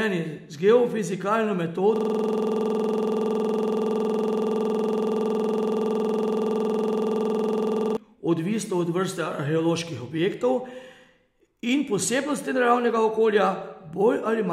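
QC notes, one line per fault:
1.96–7.97 s, system hang loop: the playback froze, but the sound hardware kept cycling one 46.44 ms piece of the buffer, which fits a 2048-sample ring buffer. That slice repeats exactly, well over a hundred times, at 21.5 Hz, giving a rough, rapid machine-gun stutter with a buzzy edge instead of speech. On a waveform the six seconds show one identical segment tiled end to end. On a spectrogram the region appears as frozen, repeating vertical bands, with the spectrum broken into fine lines 21.5 Hz apart.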